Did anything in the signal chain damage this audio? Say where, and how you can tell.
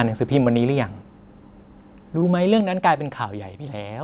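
Yes. At the network stage, short concealed packet loss hit twice, at 0.44 to 0.48 s and 2.20 to 2.24 s. Each time about 20 ms of speech never reached the decoder. The receiver patched the gap by extending the preceding sound and then blending back into real audio. That shows up as a brief smear or wobble where a short consonant can get lost, inside a band that stops at 4 kHz, consistent with G.711 mu-law at 64 kbps.

In the call processing stage, the microphone volume stepped down twice. At 1.02 s the speech and its background fall together by about 3 dB in a single instant, and at 2.61 s they fall again by about 4 dB. Both sound and room drop at once, with no fade, so a gain control most likely cut the device's input volume in one step each time.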